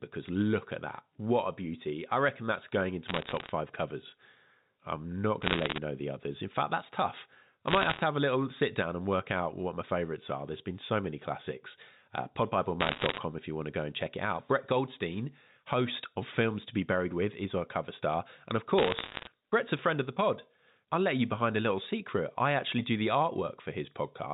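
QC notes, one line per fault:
3.08–3.50 s, 5.42–5.78 s, 7.68–8.00 s, 12.80–13.18 s, 18.78–19.28 s: bit errors on a digital phone line. Crackly bursts of sharp ticks over otherwise unchanged speech, starting right after "I reckon that's going" at 3.08 s. Roughly 0.7 to 1.5 bits in a hundred are flipped. Each hit on a sign or high-order bit knocks one sample far off. In the waveform these appear as isolated single-sample spikes. On the spectrogram they show as thin vertical lines running up to the G.711 line's 4 kHz ceiling.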